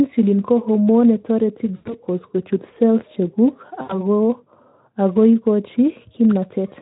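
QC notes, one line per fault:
1.75–2.02 s and 3.81–4.03 s: VoIP packet loss concealed by the speech codec. Roughly 100 ms and then 80 ms of speech go missing, which fits five and four 20 ms frames. The Speex decoder fills each gap by repeating its last pitch and spectral shape at falling gain. So the speech smears into a fading buzz or coloured noise. Because each frame builds on the one before, the speech stays weak or distorted for a short while after the gaps close.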